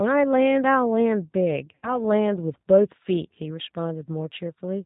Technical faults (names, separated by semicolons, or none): G.729 codec; VoIP packet loss concealed by the speech codec